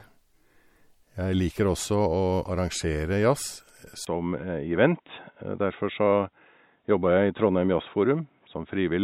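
From the start, the whole clip carries plainly audible MP3 compression. The treble stops at about 19.9 kHz, and the damage sounds like what you get at something around 64 kbps. With that few bits, the encoder keeps dropping weaker frequency detail and then bringing it back from one frame to the next. That gives the speech a watery, swirly quality, with a metallic edge on s sounds and softened attacks.

At 4.05 s there's a 20 ms gap, and from there to the end the sound goes dull and boxy. It's most likely an input switched to a poorer device, such as another mic or a headset's call mode. Nothing comes through above 3.8 kHz anymore, and a new noise floor sits about 50 dB under the speech. The level stays about the same, so the change you hear is in tone and bandwidth, not loudness.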